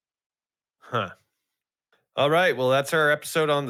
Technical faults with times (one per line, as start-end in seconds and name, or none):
none